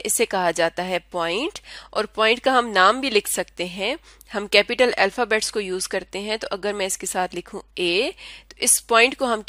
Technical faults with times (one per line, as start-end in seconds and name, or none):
none